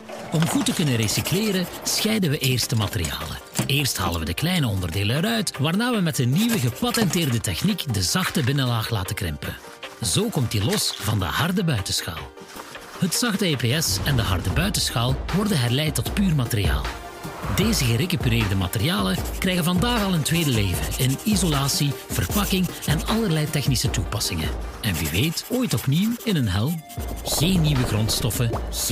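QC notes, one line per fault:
No technical faults can be heard at any point in the audio.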